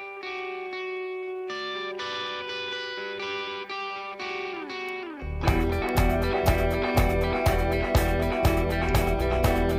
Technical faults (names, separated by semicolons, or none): bit error spike